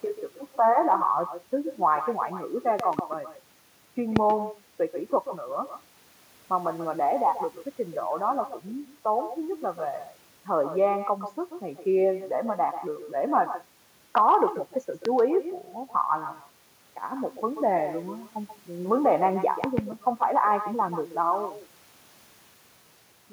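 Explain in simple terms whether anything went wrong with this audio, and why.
Two things went wrong. The first is echo with no canceller. The far end played the call through a loudspeaker, its microphone picked that up, and nothing removed it. Throughout, the speech is shadowed a short moment later, roughly 0.15 of a second, by a quieter, thinner copy of itself.

The second is a series of loud pops, most likely from an electrical glitch such as a plug, switch or static. A sudden voltage jolt got added to the signal. Sharp pops much louder than the speech cut through at 2.8 to 3.0 seconds (two in quick succession), 4.16, 15.05, and 19.64 to 19.81 seconds (two again). The speech carries on underneath each one.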